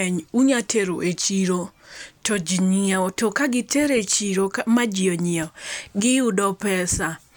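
No technical faults are audible.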